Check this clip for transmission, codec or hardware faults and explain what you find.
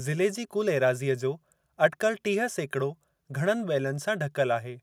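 I found no faults to explain in the clip.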